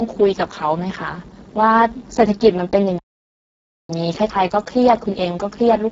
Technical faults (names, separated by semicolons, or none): Speex codec; playback stall